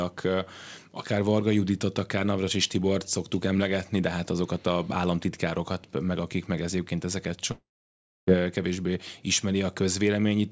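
From 7.52 to 8.29 s the speech breaks off for about 0.77 s, most likely from a long network dropout. The last sound is stretched into a brief fading buzz, then about 0.64 s of near-silence follows before speech resumes with that stretch missing. Unlike a short packet loss, the concealment gives up and goes quiet. Unlike a clean edit or mute, the buzzy tail betrays it. Throughout, the call codec leaves nothing above 8 kHz.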